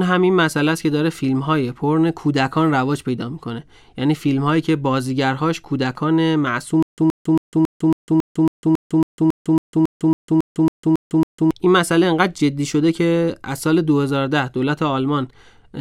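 From 6.83 to 11.51 s, stutter with silent gaps: a 123 ms burst recurs every 275 ms with silence between, not seamless looping, likely a stalled stream.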